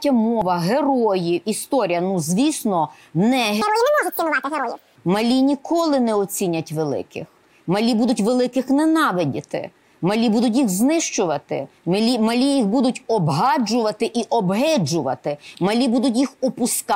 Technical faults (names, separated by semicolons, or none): section at the wrong speed